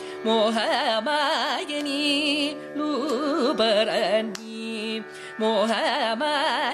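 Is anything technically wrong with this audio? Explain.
No, nothing technically wrong can be heard in this audio.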